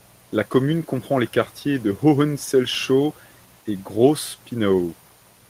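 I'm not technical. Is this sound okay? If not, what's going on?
No. There is echo leak, heard twice: from 3.08 to 3.56 s and from 4.80 to 5.16 s. In both places a very faint second copy of the speech trails the original by about 0.17 seconds, like a quiet repeat just behind it. The likely cause is a speakerphone on the other end whose echo cancelling missed part of what its microphone picked up from its own loudspeaker, so that leftover sound was sent back into the call.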